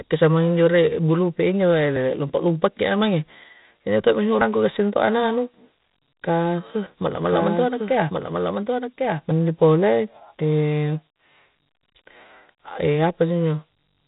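From start to finish the speech carries 4-bit ADPCM compression, and the damage is heavy. Each sample is coded as a coarse 4-bit step from a predicted value, so the quantisation error becomes broadband grit that rises and falls with the voice, loudest on stressed syllables and rough on sharp onsets. Nothing sits above 3.8 kHz, which fits a 32 kbps stream. A spectrogram shows a noise haze tracking the speech energy and a hard ceiling near 3.8 kHz.

At 1.96 s and again at 4.41 s the sound skips forward, with audio missing between chunks. A sliver of around 50 ms vanishes and the two edges are butted together without any gap. This is likely the recorder dropping samples while it closes one 2.5-second block and opens the next. On a waveform each point shows an abrupt change in wave shape with no silence. On a spectrogram each shows a narrow vertical seam where formant lines jump rather than glide.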